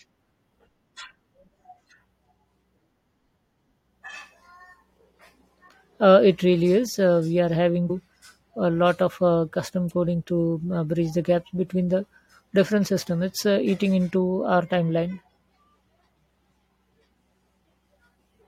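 Speech clip with damaged data in a compressed stream: corrupted bytes left the decoder misreading a frame and losing sync until it found the next frame header, producing a brief blip at about 7.89 s, right after "we are having".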